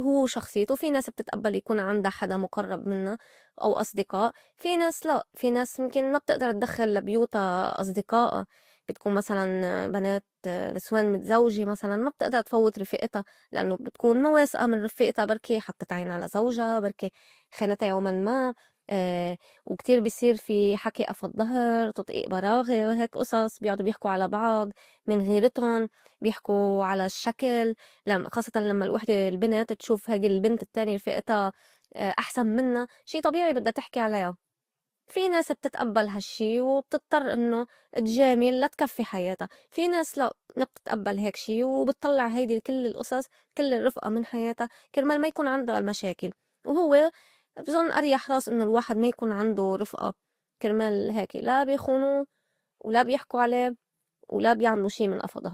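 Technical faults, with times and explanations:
Throughout, transcoding between lossy codecs: the speech has a layered texture in which the different coding artefacts are heard together, and nothing above 20.1 kHz. The likely cause is that the audio was encoded in one lossy format and then re-encoded in another, a chain that points to Vorbis at around 47 kbit/s followed by Opus at around 48 kbit/s, so the second encoder spent its bits reproducing the first one's artefacts while adding its own.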